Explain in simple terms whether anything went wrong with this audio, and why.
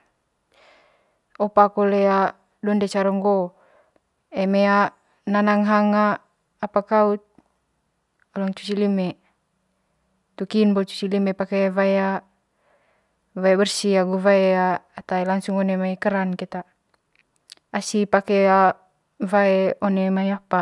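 Nothing went wrong; the speech has no audible faults.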